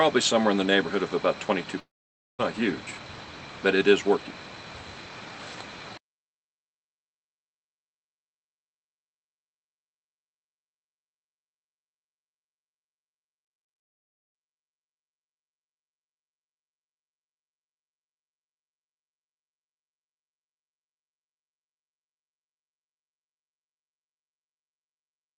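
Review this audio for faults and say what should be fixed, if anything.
From 1.79 to 2.41 s the sound smears into a fading buzz, then drops to silence for about half a second before resuming with roughly 0.6 s missing. This is likely a long network dropout, where the receiver stretched the last audio while no packets arrived. A larger jitter buffer and forward error correction or redundancy on the call link would help cover gaps of this length.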